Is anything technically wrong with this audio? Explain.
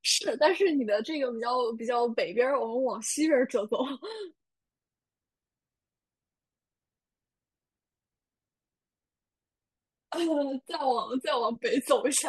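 No, nothing in this speech recording stood out as technically wrong on listening.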